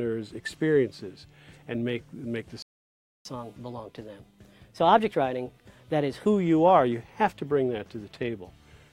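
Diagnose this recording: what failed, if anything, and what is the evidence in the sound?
The sound drops to silence from 2.62 to 3.25 s, about 0.63 s, then resumes: a playback stall, likely the player's buffer running dry.

From 3.25 to 6.25 s the sound runs 1.15 times fast, pitched up about two semitones: catch-up at higher speed, the player resampling its backlog.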